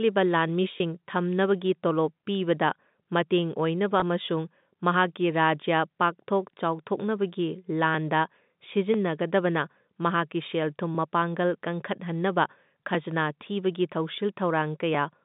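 Packet loss with pitch repetition occurs twice, from 0.78 to 0.80 s and again from 4.00 to 4.02 s. Each time about 20 ms of audio, consistent with a single lost packet, never arrived, and the receiver filled the hole by looping the most recent pitch period of the speech. Because each gap is this short, the concealment does not fade to silence. It sounds like a brief held, slightly buzzy tone before the speech carries on.

Periodic USB or driver dropouts run from 7.95 s to 14.95 s, recurring every 1.0 s, about seven in total. At each interval something stalled the audio driver or the USB transfer, and around a millisecond of signal was skipped outright, not padded with silence. The sudden jump in the waveform produces a tick or pop at a steady once-per-second rhythm, audible only while speech is present. All of this sits on a G.711 mu-law telephone channel whose band runs from 150 Hz to 3.7 kHz.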